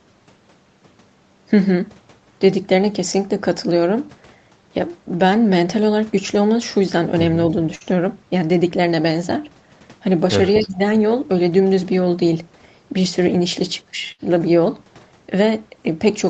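At 7.75 s a burst of packet loss cuts in, lasting until 7.87 s. About 52 ms of held, fading sound fills part of the gap. Then the speech resumes, with roughly 60 ms missing. The same burst of packet loss returns from 14.12 to 14.21 s, with about 66 ms of fill before a 60 ms jump.

From 10.55 to 10.61 s a faint, delayed copy of the speech appears. It trails by 247 ms and sits about 15 dB below the speech. This is likely an echo leak. A far-end loudspeaker's echo got past its canceller and came back.

Right after, from 10.62 to 10.78 s, the speech dips by roughly 10 dB for about 150 ms. This is speech suppressed in double talk. The likely cause is both sides talking at once, so the echo canceller turned everything down.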